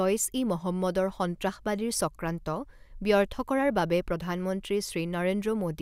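A short recording of speech, with nothing technically wrong to be heard in it. No fault turns up at any point, so there are no times or causes to give.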